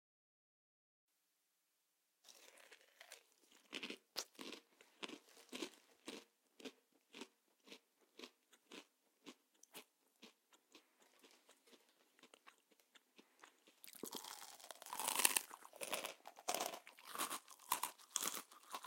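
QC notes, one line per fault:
13.95–18.86 s: doubled audio track. The same audio is likely being mixed in twice, with a second copy held out of step, perhaps from a slower capture path or a misaligned edit. It runs about 100 ms behind the original, a few dB quieter, and is just as bright and full-band, with no decay or room colour. It cuts in abruptly at 13.95 s and stays to the end, so every onset smears into a flat, slapback-like double.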